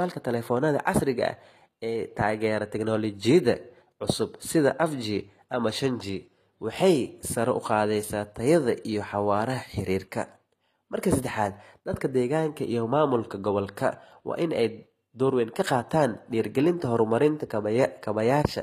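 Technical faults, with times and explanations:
Throughout, HE-AAC compression. The speech has a bright but unnatural top end, and s sounds come across gritty and metallic. Nothing is present above about 14.9 kHz. The damage is plainly audible and fits a low bitrate around 24 kbps. The likely cause is spectral band replication: the encoder keeps only the lower spectrum and fills the treble with shifted copies of it, so those upper harmonics never match the real ones.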